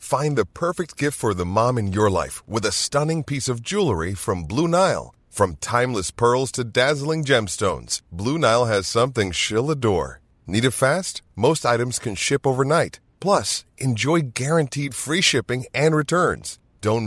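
Nothing in this bit of speech stands out as a technical fault at any point along the way.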